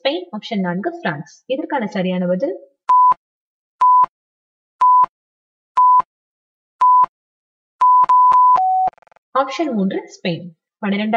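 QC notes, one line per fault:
throughout, channel delay (comb filtering): the sound is hollow and phasey, with a thinned body that never changes across the clip. One channel arrives around 5 ms behind the other, and when the two are summed to mono the shared content cancels at evenly spaced frequencies, starting near 100 Hz and repeating at odd multiples of it. Those fixed notches strip energy from the low and mid range and give the combed, tubular colouring.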